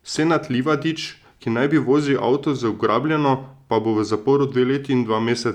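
Nothing technically wrong turns up anywhere in this short bit of speech, so there are no problem spots to time and no causes to trace.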